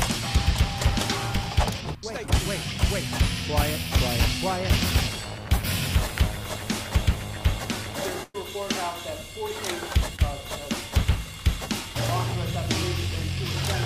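At 8.23 s there's a burst of packet loss running to 8.36 s. About 100 ms of audio never arrived in time, so the receiver stretched the last sound over the hole while fading it down. You hear a held buzz or hiss, then the sound jumps ahead past what went missing.

Then at 10.16 s comes a short concealed packet loss, only about 20 ms gone. The decoder papered over it by carrying the previous sound forward and blending back in, so it comes across as a quick smear or wobble, over by 10.20 s.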